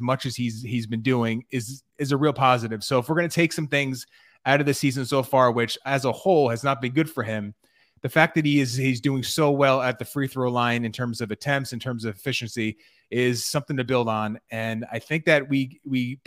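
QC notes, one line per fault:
No fault found.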